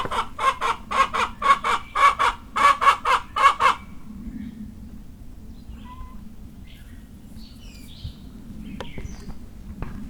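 No technical faults are audible.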